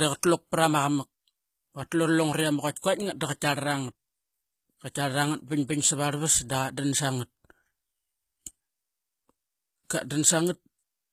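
From start to finish, the speech carries plainly audible HE-AAC compression damage, likely from a low bitrate near 20 kbps. Treble is rebuilt from copied lower bands, so s sounds turn gritty and metallic. Nothing remains above 14.9 kHz.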